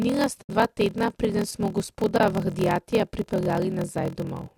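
Throughout, a block size mismatch (padded) inserts a short zero gap every block, consistent with 1024-sample writes into 1152-sample reads. It produces a 41.7 Hz buzz and slows the speech to 0.889 speed at normal pitch. The waveform shows regular notches, and the spectrogram shows vertical lines.

From 0.42 to 0.50 s, and again from 2.18 to 2.21 s, AAC frame loss with muting zeroes the decoded spectrum. The sound fades softly into a hole. On the spectrogram this is a blank column, and the waveform tapers in and out.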